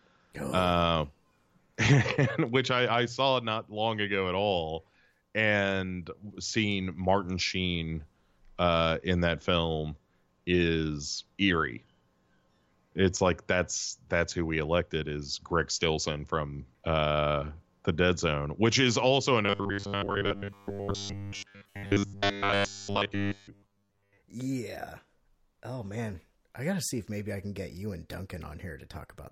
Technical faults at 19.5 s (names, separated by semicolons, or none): robotic sound from repeated short buffers